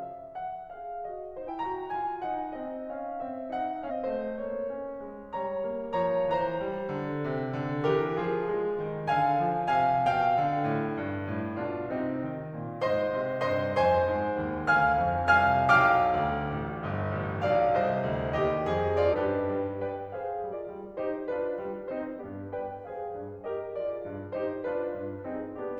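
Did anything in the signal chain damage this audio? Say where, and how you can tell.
Yes: compressed frames were skipped at decode, at 1.44, 3.86, 19.09, 20.48 and 22.16 s. The music jumps ahead by about 0.7, 0.4, 0.5, 0.7 and 0.3 s respectively.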